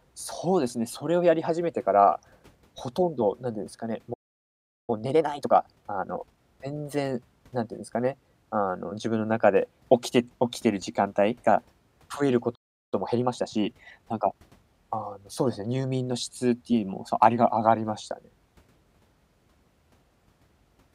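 Playback stalls at 4.13 s and 12.55 s cut this speech recording to silence for about 0.75 s and 0.37 s, then the sound resumes where it stopped, likely because the player ran out of buffered data or its thread was blocked. Time-compressed catch-up follows each gap, from 4.90 to 6.38 s at 1.5 times speed and from 12.94 to 14.42 s at 1.25 times speed: the player clears its backlog by dropping and cross-fading short slices, so the speech sounds hurried at normal pitch.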